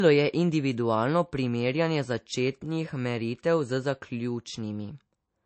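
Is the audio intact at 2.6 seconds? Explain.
No. At 2.6 s, as across the whole clip, the speech sounds dull and smeared, with nothing above 8.3 kHz. This is likely low-bitrate audio saved at a high bitrate: a heavily compressed MP3 re-encoded at a high rate, which can't restore what was discarded.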